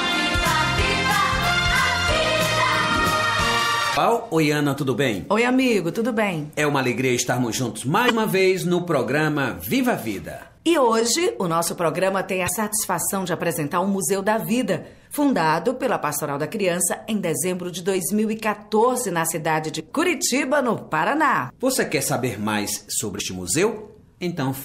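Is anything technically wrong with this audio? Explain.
Yes, there's damaged data in the compressed stream, five short hits at 3.93–3.98, 8.06–8.11, 12.45–12.49, 19.76–19.81 and 23.16–23.20 s. Each time the decoder chokes on corrupted frames and loses sync until the next good header, giving a quick glitch of about 45 ms.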